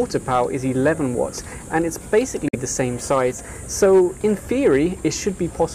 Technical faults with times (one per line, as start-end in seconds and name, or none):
0.16-0.42 hard clipping
2.14-3.21 hard clipping
2.48-2.55 Bluetooth dropout
3.83-4.01 hard clipping
4.52-4.76 hard clipping